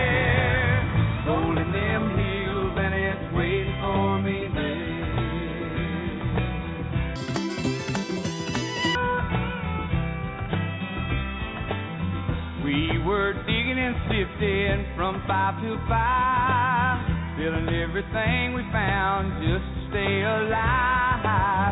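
From 7.16 to 8.95 s the sound runs at double speed and jumps up a full octave. This is a wrong sample rate fault. The samples are played back faster than they were captured, with no rate conversion in between. Speed and pitch therefore rise together by the same factor of 2.0, or 12 semitones. That ratio fits material recorded at 8 kHz but played at 16 kHz. The result sounds high, thin and rushed.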